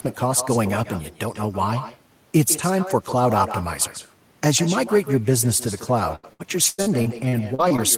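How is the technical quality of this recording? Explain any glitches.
The recording has two clear faults: an echo that runs through the whole clip, and a burst of robotic, broken-up sound near the end.

Echo with no canceller affects the entire clip. The far end is playing the call through a loudspeaker, and its microphone picks that playback up and sends it straight back, with nothing in the chain to subtract it. After roughly 150 ms of round trip, a copy of the speech returns at about 12 dB below the original. Every phrase is shadowed by a quieter, thinner repeat.

Repeated packet loss (robotic sound) runs from 6.15 s to 7.80 s. During that stretch the stream repeatedly lost or received late audio data. There are nine separate holes, the longest lasting 99 ms. The decoder patched each one by stretching the last sound it had. Around 400 ms in total was rebuilt this way, about a quarter of that span. 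This leaves the speech choppy, with fragments missing.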